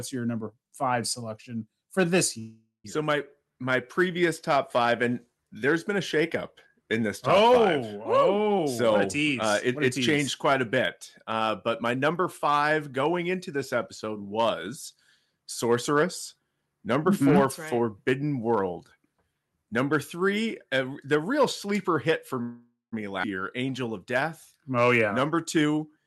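Right after "five selection for this", at 2.39 s, there's a call audio freeze lasting until 2.86 s. It's most likely packets stalling in transit and the jitter buffer running dry. The receiver stretches the last bit of sound into a fading buzz, then goes quiet for about 140 ms, and picks up exactly where it left off. Nothing is lost, but the whole thing now runs about 0.45 s later.

From 8.58 to 10.23 s, leading into "quite a", the jitter buffer speed-up kicks in. The buffer had built up too much audio, so the receiver keeps snipping out tiny pitch-period slices to catch up, around a third of a second in all. That works out to about 115% speed at unchanged pitch, so it sounds rushed. A gentler pass at about 108% runs from 11.24 to 13.31 s, leading into "this episode was", and trims roughly 150 ms.

A second freeze of the same kind hits at 22.41 to 22.94 s. Again there's a decaying tail, then about 180 ms of silence, and the audio resumes with nothing missing, now about 0.5 s further behind.

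Right after that, at 23.22 to 23.25 s, there's a skip ahead. Around 200 ms of sound is dropped, and the two sides get spliced together almost seamlessly, so you hear a small jump forward instead of a gap.

The clip closes with another 115% speed-up from 24.73 to 26.04 s, shaving off about 200 ms and hurrying the ending. Underneath all of this you can hear Opus call coding, with the top end cut off around 12 kHz.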